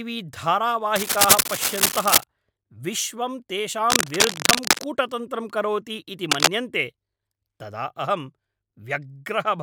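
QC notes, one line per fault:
0.96–2.24 s, 3.90–4.86 s (after "विश्वं तेषां") and 6.31–6.49 s (after "करोति इति"): cable scratch noise. Dense, irregular bursts of scratching rustle sit about 5 dB above the speech. The likely cause is a worn cable or connector being moved, so its contact resistance fluctuates. The noise is clustered and ragged, unlike isolated clicks or steady hiss.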